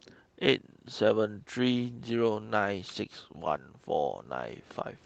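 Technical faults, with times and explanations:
No technical faults detected.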